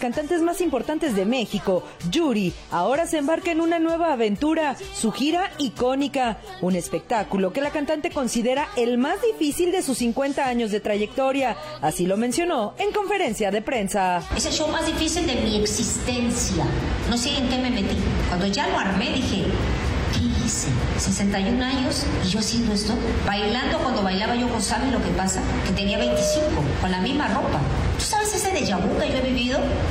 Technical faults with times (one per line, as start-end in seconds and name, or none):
25.61-26.53 loudspeaker feedback squeal